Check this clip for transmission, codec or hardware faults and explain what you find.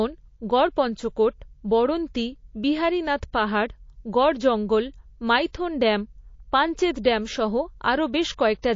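One codec fault runs through the whole recording. From start to finish the speech has a watery, swirling quality, with metallic chirps on the s sounds, dull treble, and softened consonant onsets. The likely cause is MP3 compression at a low bitrate, around 32 kbps. With so few bits to spend, the encoder drops the top of the spectrum and discards weaker frequency lines that flicker on and off between frames, producing the swirl and chirp.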